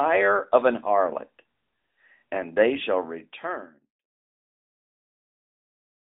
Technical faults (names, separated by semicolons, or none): AMR narrowband mobile codec